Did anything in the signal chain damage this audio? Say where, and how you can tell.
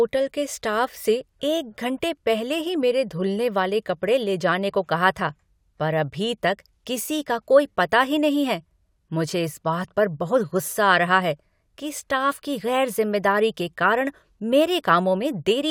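No, nothing in the chain damaged it.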